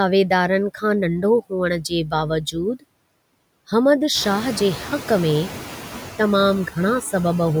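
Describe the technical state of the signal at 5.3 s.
At 5.3 s, noise suppressor artifacts are present, as they are throughout: the suppressor pulls steady noise down by about 19 dB frame by frame. With the room noise raised since around 4 s, the noise sinks between the words and rises under them.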